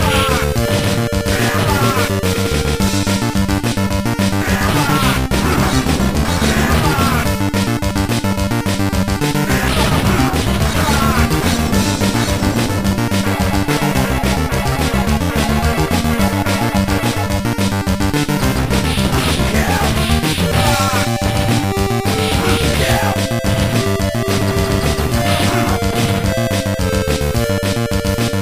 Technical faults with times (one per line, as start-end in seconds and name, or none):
none